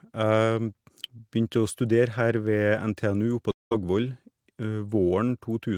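From 3.51 to 3.72 s, speech decays into a fading buzz, then silence, likely a long network dropout. Unlike a brief glitch, 0.2 s is lost outright.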